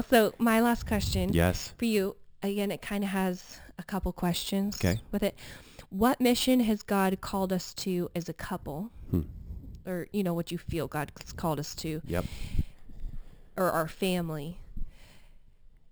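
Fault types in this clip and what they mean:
imaging from sample-and-hold upsampling: The rate was raised by repeating each sample without a smoothing filter, which fits a 12 kHz original taken to 44.1 kHz. Mirrored copies fill 6 to 12 kHz, about 18 dB below the speech, heard as metallic fizz tracking its level.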